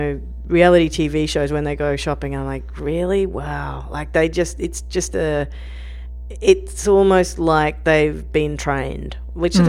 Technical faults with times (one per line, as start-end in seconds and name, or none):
0.00-9.69 mains hum